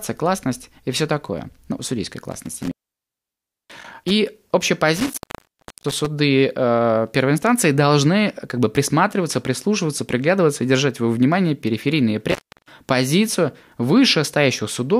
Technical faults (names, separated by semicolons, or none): intermittent contact